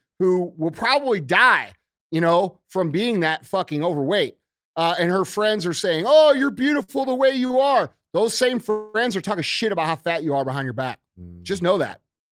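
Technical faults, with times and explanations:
6.83–6.90 s, 7.46–7.51 s and 7.51–7.55 s, short stalls from a late packet: the sound hangs briefly with a faint buzzy smear, about 48, 32 and 20 ms of filler, as the jitter buffer ran dry and the receiver held the last bit before carrying on where it left off.
8.70–8.96 s, call audio freeze: the sound locks into a stretched, fading buzz for about 240 ms without dropping to silence, then resumes from the same point with nothing lost, likely packets held up in transit that emptied the jitter buffer.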